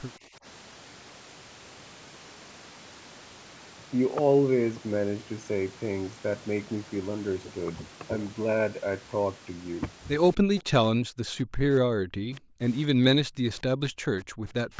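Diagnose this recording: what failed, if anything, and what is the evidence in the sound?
Speech suppressed in double talk, in call processing: from 0.18 to 0.45 s the speech dips by roughly 10 dB, likely because the echo canceller could not separate the talker from the far end. This differs from gating because the speech itself sinks, not just the room.

Echo leak, also in call processing: a copy of the speech returns 235 ms late at 10.34–10.62 s and 12.35–12.4 s, some 20 to 30 dB down. This is likely uncancelled loudspeaker pickup, since it is a discrete repeat rather than smeared reverberation.

Background gated by the echo canceller: the room sound drops by about 40 dB at 10.41–10.54, 10.93–12.6, 12.92–13.52 and 13.91–14.47 s. This is suppression during loudspeaker playback, not a noise gate reacting to silence.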